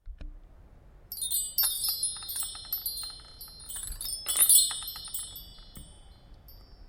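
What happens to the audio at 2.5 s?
Nothing goes wrong at 2.5 s; the audio plays through that moment intact, with no dropout, click or distortion.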